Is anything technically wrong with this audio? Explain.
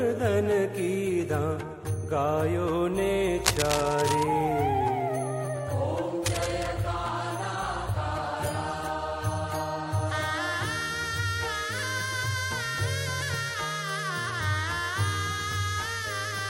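Yes, there are two kinds of fault. From 3.45 to 4.23 s, and again from 6.26 to 6.68 s, dense, uneven scratching and rustling sits on top of the sound, about 5 dB below it the first time and about 10 dB below the second. This is likely cable scratch noise: a worn cable, plug or control being moved, its contact resistance flickering rapidly and injecting irregular bursts of noise into the signal.

From 10.33 to 13.03 s a fine hiss and roughness clings to the audio, growing on louder and brighter passages and vanishing in the quiet gaps, at roughly 30 dB below the signal. This is sample clock jitter. The converter's timing wanders by a few microseconds, so each sample is taken slightly early or late. The error is largest where the waveform changes fastest, which is why it follows the level and treble.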